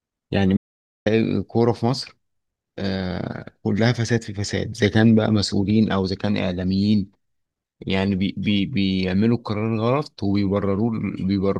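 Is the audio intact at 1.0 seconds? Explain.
No. At 1.0 seconds the speech is inside an audio dropout to silence running from 0.57 to 1.06 s, about 0.49 s long. The input was likely lost briefly while recording continued writing silence, so the signal cuts to total silence with no room tone, then resumes mid-flow.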